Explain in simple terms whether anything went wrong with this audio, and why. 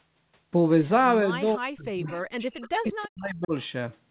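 Two things went wrong, both in the middle of this speech clip.

From 1.41 to 3.53 s the voice sinks, at its worst to almost nothing. This is speech suppressed in double talk. The likely cause is that both people spoke at once. The call's echo canceller couldn't tell this talker apart from the sound coming out of the loudspeaker, so it turned everything down for about two seconds.

Inside that same stretch there are two brief, faint repeats of the voice, at 2.08 to 2.16 s and at 2.62 to 2.69 s. Each arrives about a third of a second after the original sound. This is echo leak. The likely cause is that one side was on a loudspeaker, and its echo canceller missed a few scraps of what its microphone picked up. Those scraps were sent back down the line, where they are heard as a quiet, delayed echo.

The narrow, telephone-like sound with nothing above 4 kHz comes from the call's audio coding and is normal for this kind of call.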